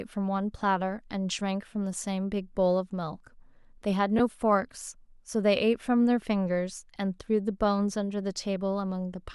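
At 4.18 to 4.20 s, lost LE Audio frames cause a brief grainy smear. About 15 ms went missing, which fits two 7.5 ms frames. The decoder filled the gap with a noisy copy of the last spectrum. At 6.95 s, a shorter 7.5 ms loss repeats the effect. The light breathiness around it is likely from LC3 compression.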